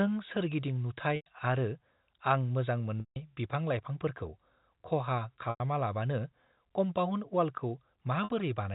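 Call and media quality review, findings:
Buzzy, held tone bridging gaps at 1.16 s, 3.0 s, 5.5 s and 8.24 s. The longest, at 3.0 s, fades toward silence before speech cross-fades back. Packet loss with pitch repetition: the receiver loops the last pitch period across lost spans of 100, 160, 100 and 60 ms, consistent with 20 ms packets. The narrow top end, nothing above 4 kHz, comes from the G.711 telephone coding path.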